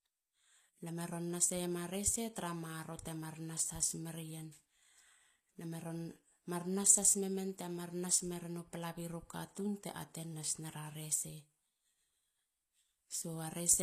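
From start to finish, the speech carries plainly audible HE-AAC compression damage, likely from a low bitrate near 24 kbps. Sibilants sound gritty and metallic. A spectrogram shows a smeared, patchy upper band with mismatched harmonics and nothing above 14.9 kHz.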